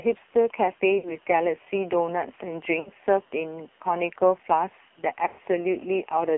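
Throughout, the speech carries heavy AMR narrowband mobile codec damage: the band runs only from about 250 Hz to 3.6 kHz, and the voice sounds buzzy and synthetic. That fits AMR-NB at a low rate near 5.9 kbps, where too few pulses model each frame.

Lost AMR speech frames occur at 0.98 to 1.16 s and 2.80 to 2.90 s, each briefly stretching and dipping the voice over a 60 ms gap consistent with three frames, then at 5.28 to 5.40 s, a longer 100 ms fade before the speech returns rough.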